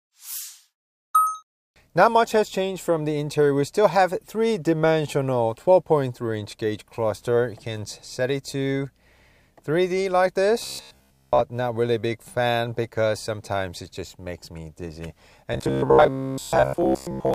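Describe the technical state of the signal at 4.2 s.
At 4.2 s the signal is intact, with nothing audible there that points to a fault in the recording or playback path.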